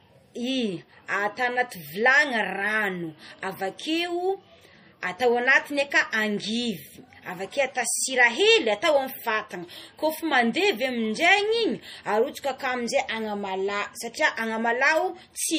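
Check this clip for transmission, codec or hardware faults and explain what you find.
One codec fault runs through the whole clip. Throughout, the speech sounds watery and swirly, with nothing above 15.3 kHz: likely MP3 compression, its plainly audible damage fitting a starved bitrate near 40 kbps.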